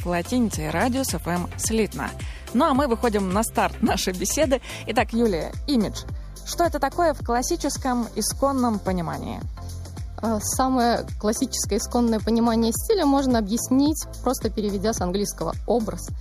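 From about 5.13 s to the end, the sound turns hollow. This is channel delay causing comb filtering. One channel arrives roughly a fifth of a millisecond late, and the two are summed to mono. Cancellation then cuts fixed notches, the first near 3 kHz.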